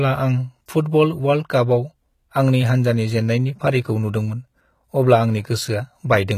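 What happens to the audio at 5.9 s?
At 5.9 s you're hearing the same damage that runs through the whole speech clip: it's likely HE-AAC compression, at a low rate around 20 kbps. The treble is rebuilt by copying lower bands upward, so s sounds come out gritty and metallic, with the highs not quite matching the body.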